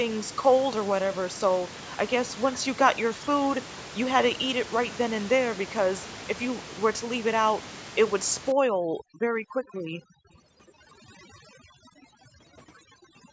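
From 8.52 s to the end, the background drops and breaks up into twinkling specks. This is overdone noise removal: an aggressive noise reducer shuts off individual frequency bands near its noise estimate, taking quiet parts of the speech with them.

The room noise, normally about 14 dB below the speech, drops out by about 40 dB at 8.73 to 9.27 s, 9.52 to 9.72 s and 10.05 to 10.29 s, and dips by about 19 dB at 11.57 to 11.98 s. This is background gated by the echo canceller, which pulled the microphone down hard while the far loudspeaker played.

From 9.74 to 10.04 s, and briefly at 10.30 to 10.37 s, a faint copy of the speech trails about 299 ms behind. This is echo leak, likely from a loudspeaker whose echo canceller let part of the pickup through.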